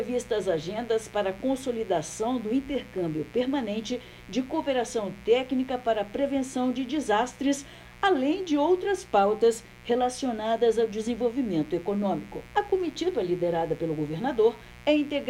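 A steady, raspy buzz runs underneath the sound from start to finish. This is mains buzz: switching spikes, twice in every cycle of the 60 Hz mains, leak in, sitting roughly 25 dB below the audio.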